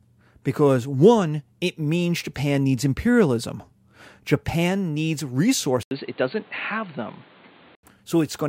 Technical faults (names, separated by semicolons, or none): input switched to a poorer device